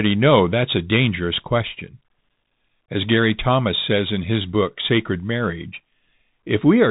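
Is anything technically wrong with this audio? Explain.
Yes. Bluetooth CVSD headset codec, throughout: one-bit up-down coding with an adapting step cuts all above 3.8 kHz, scratches s sounds and leaves granular hiss under speech.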